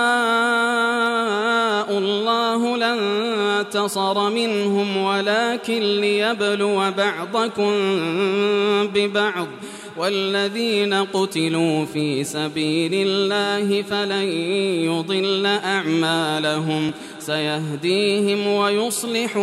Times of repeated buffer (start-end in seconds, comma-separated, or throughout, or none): 16.89